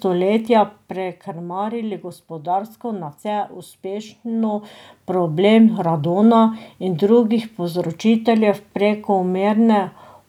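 Speech recording with no technical faults detected.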